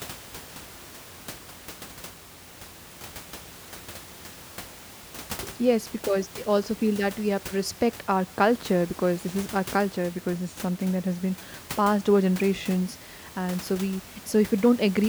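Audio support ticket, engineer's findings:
No faults found in this speech recording.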